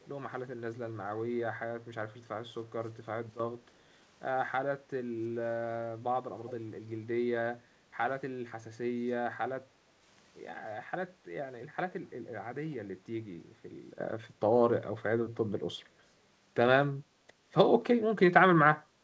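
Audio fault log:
0.00–0.07 s and 6.47–6.54 s, echo leak: a faint copy of the sound returns 333 ms late, about 35 dB then 20 dB down. Likely loudspeaker pickup the far-end canceller missed.
3.30–3.40 s and 13.99 s to the end, sudden gain jump: level and background drop about 12 dB, then later rise about 11 dB, with no ramp.
9.70–9.83 s, background gated by the echo canceller: the room sound dips about 6 dB for roughly a tenth of a second, then returns when the canceller releases the microphone.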